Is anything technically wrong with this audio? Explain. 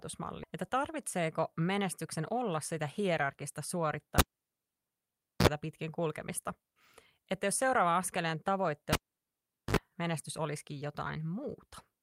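Yes, there are four faults in this speech.

At 0.43 s there is a skip ahead: audio was dropped while later audio was already waiting, so about half a second vanishes and playback jumps forward with no gap.

From 1.16 to 1.61 s there is a jitter buffer speed-up: an overfull buffer trimmed short pitch-period slices, a few tens of milliseconds in all, so the speech runs 7% fast at unchanged pitch.

At 4.18 to 5.48 s and 8.93 to 9.77 s a cable was pulled and plugged in. A pop is followed by near silence lasting 1.24 s and then 0.79 s. Partial contact adds a brief 60 Hz buzz of 48 ms the first time and a 50 Hz buzz of 57 ms the second, and another pop comes as the sound returns.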